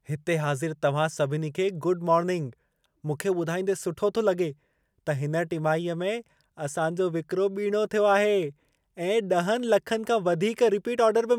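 No technical faults can be heard at any point in the recording, and the speech signal stays intact throughout.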